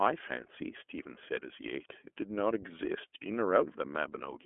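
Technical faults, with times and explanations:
Throughout, iLBC codec: the speech carries nothing above 3.7 kHz and sits in a phone-like 250 Hz to 3.4 kHz band. It sounds plainly rough and synthetic because each frame's excitation is coded independently, consistent with 30 ms frames near 13 kbps.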